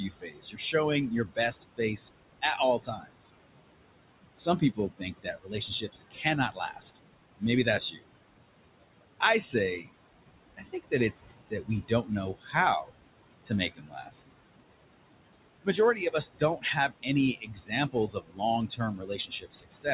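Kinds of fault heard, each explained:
Noise suppressor artifacts: The suppressor judges, frame by frame, which frequency bands hold steady background and pulls them down, here by about 21 dB. The room noise, which sits about 13 dB under the speech, drops away in the pauses and swells back under each phrase, so the floor pumps throughout. The speech is narrowed by the band limit at 4 kHz, which fits telephone-grade coding.
Speech cut by the noise suppressor: Here the suppressor mistakes parts of the speech for noise and turns them down along with the background, with drops of about 20 to 22 dB. It happens in four stretches, 0.09 to 3.29 s, 4.37 to 8.04 s, 10.57 to 14.15 s and 15.62 s to the end. In each of the first three, roughly a second of material is affected. Soft consonants, word endings and quieter passages come out faint or swallowed.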